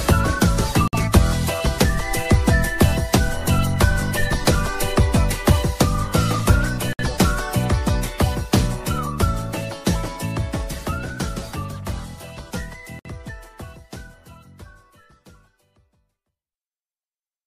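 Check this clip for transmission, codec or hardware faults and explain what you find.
The clip has one codec fault, recurring three times: a gap at a join of encoded pieces, at 0.88–0.93 s (55 ms), 6.93–6.99 s (60 ms) and 12.99–13.05 s (60 ms), spaced every 6.0 s. The audio was encoded as separate six-second pieces and joined without trimming each run's start-up delay or its padded last frame. As a result, a brief silence cuts into the continuous sound, with edges smeared, and the sound then resumes exactly where it stopped.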